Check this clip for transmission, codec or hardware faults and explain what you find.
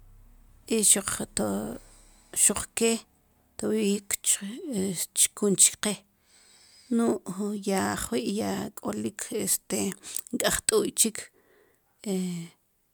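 Nothing here points to a transmission, codec or hardware problem; the speech comes across just as you'd hope, with nothing to flag.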